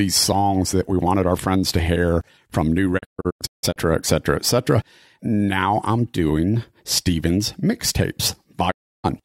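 At 2.97 s, after "to hear from new", a digital broadcast dropout punches short holes until 3.78 s. Sound returns at "etc etc". The receiver lost good frames and muted, fading in about 20 ms. Another full mute runs 8.70 to 9.06 s.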